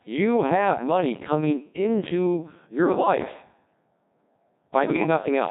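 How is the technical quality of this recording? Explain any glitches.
The technical quality is poor: the speech is synthetic and buzzy throughout, and it breaks up briefly near the end.

Codec 2 vocoder, throughout: the decoder rebuilds the voice from pitch, voicing, energy and a coarse envelope, which fits Codec 2 at about 1.6 kbit/s. The heavy damage sounds robotic. A spectrogram shows rigid, evenly spaced harmonic stripes with smeared formants. The waveform is overly regular.

Bit errors on digital voice radio, 4.85 to 5.06 s: roughly one bit in ten arrived flipped, which fits a handful of corrupted frames. Each bad frame gets the wrong pitch, level or spectrum, so the voice warbles and bleeps into gibberish. A spectrogram shows harmonics jumping abruptly between frames.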